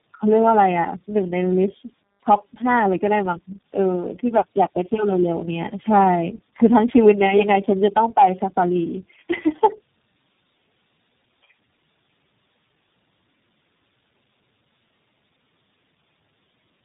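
From start to finish the speech carries tandem speech coding. It sounds like about four separate speech coders in a row, something like AMR-NB, CVSD, G.729A and finally iLBC, with plain G.711 hops between them. Each stage re-encodes the previous one's already damaged output, so the errors pile up. You hear it as rough, muffled and warbly speech, and nothing comes through above about 3.7 kHz.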